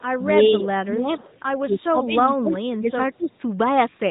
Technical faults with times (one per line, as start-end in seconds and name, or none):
0.00-0.25 echo leak
0.08-1.29 speech suppressed in double talk
1.65-3.34 speech suppressed in double talk